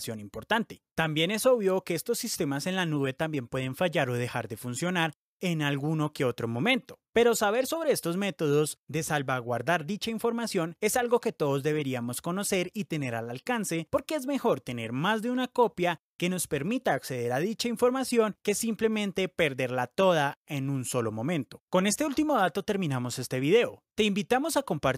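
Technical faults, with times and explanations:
No technical faults detected.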